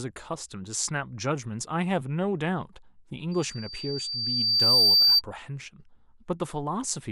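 From 3.31 s to 5.22 s a loudspeaker feedback squeal develops: the microphone is picking up its own loudspeaker, and at 4.6 kHz the loop gain exceeds unity. A pure tone swells over roughly one and a half seconds to about 15 dB above the speech.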